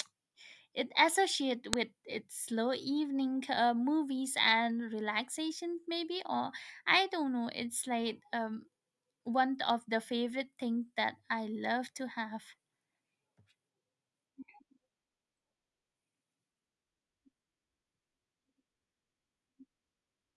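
A file header played as audio at 1.73 s: a sharp, loud click where a joined WAV piece's header bytes were read as samples instead of stripped.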